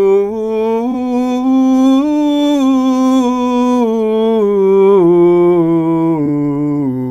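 At 0.91 to 0.95 s and again at 6.25 to 6.28 s the music is briefly disturbed, each time for the length of one damaged frame: a corrupt frame concealed by the decoder, which patched it itself instead of producing a sharp squeak.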